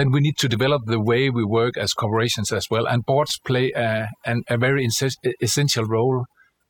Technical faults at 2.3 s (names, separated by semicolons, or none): overdone noise removal